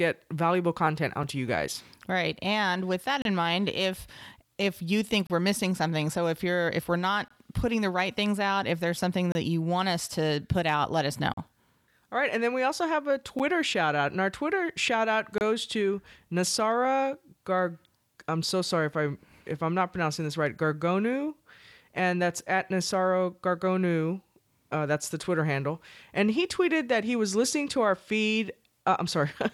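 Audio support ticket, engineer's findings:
Gap between stream segments at 1.23, 3.22, 5.27, 7.28, 9.32, 11.34, 13.39 and 15.38 s. Hard-edged silent dropouts of roughly 6 to 38 ms in speech, e.g. between "with that" and "in mind if if" at 3.22 s, and between "we also have a" and "shout out and our" at 13.39 s. The 2 s spacing points to 2-second segments. Segment timestamps leave a small gap that the player fills with silence. No audio lost.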